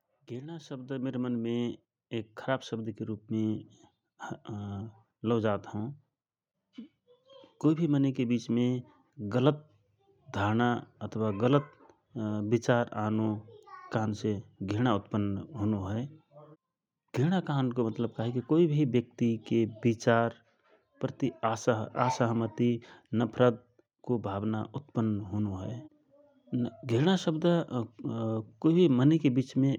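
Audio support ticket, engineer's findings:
Automatic gain rising. AGC judged input level too low, ramped its gain up slowly from 0.28 s to 6.03 s, about 13 dB total. Whole signal lifted together: speech and room/background noise swell as one over nearly 6 s. Probable component: capture-side AGC stage before encoding.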